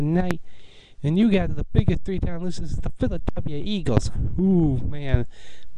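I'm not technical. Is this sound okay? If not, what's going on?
No. Loud pops occur at 0.31–0.33 s, 1.79–1.91 s (two in quick succession), 3.97–4.00 s and 5.14–5.17 s. Each is a sudden electrical jolt, likely from a plug, switch or static, sitting on top of the sound, which carries on underneath instead of cutting out.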